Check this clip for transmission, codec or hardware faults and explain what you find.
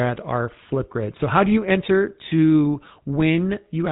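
One codec fault runs throughout the speech: a buzzy, gravelly roughness with nothing above 3.8 kHz, the signature of the GSM full-rate codec, consistent with its 13 kbps, pulse-driven vocal-tract model.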